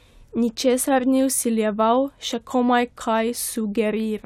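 No technical faults can be heard anywhere in the speech. There is nothing to place on the timeline and no fault to describe.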